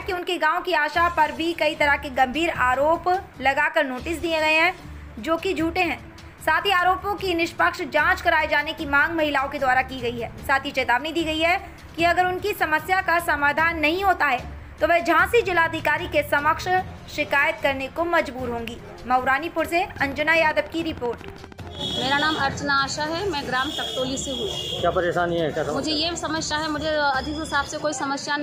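From 19.96 to 22.54 s, a train of clicks sits over the sound. About thirty near-identical pulses arrive evenly, 12.9 per second, peaking a few dB above the audio. They tick steadily. Interference from nearby equipment or a faulty connection is the likely cause.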